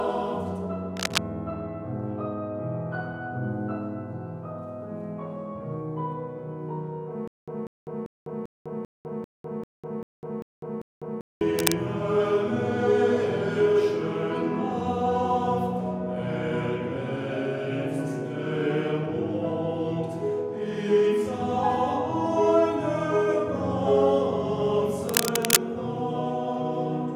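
A worn cable or connector being moved is the likely cause of three bursts of cable scratch noise, at 0.97 to 1.19 s, 11.58 to 11.74 s and 25.09 to 25.63 s. The contact resistance jumps about unevenly, so dense, ragged noise is laid over the sound at roughly the same loudness as the sound itself. It is heard as brief scratching or rustling, with the last burst lasting about half a second.

From 7.28 to 11.41 s, a stall in playback or streaming likely produces stutter with silent gaps. At each retry the player repeats the last fragment, about 193 ms long, and then runs dry for about 200 ms of digital silence. This repeats ten times at an even 393 ms period, giving a mechanical on-off pattern. The audio that should have played during those four seconds is lost.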